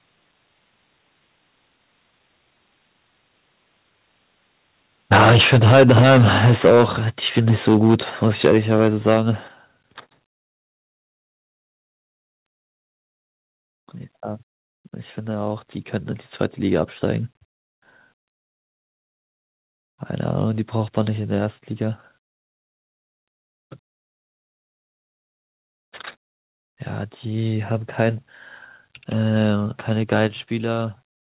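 Speech over a narrowband call path with nothing above 4 kHz, which fits a G.711 link, has microphone overload at 5.12–6.85, 7.37–7.95, 8.22–9.18 and 30.12–30.25 s. The peaks are squared off with a harsh crackle, likely from input gain pushed about 2 to 12 dB past the converter's limit. Unlike codec noise, the crackle follows only the loudest syllables. The microphone volume is stepped down at 5.13, 8.47, 9.48 and 30.27 s, by about 3 to 6 dB each time, likely the call software's automatic gain control reacting to those peaks. Unlike a fade, voice and background drop together in a single instant.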